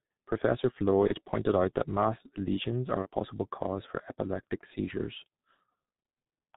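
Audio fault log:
throughout: G.723.1 codec. The speech is muffled and hoarse, with nothing above 4 kHz and blurred consonants, because the coder models the voice in coarse 30 ms frames that it updates slowly. The heavy damage fits its 6.3 kbit/s mode.
1.07–1.13 s and 3.03–3.08 s: VoIP packet loss concealed by the speech codec. Each gap holds a brief, fading smear, consistent with one lost 30 ms frame. The decoder fills the missing data by repeating its last pitch and filter at falling gain, and the voice stays weakened briefly afterwards.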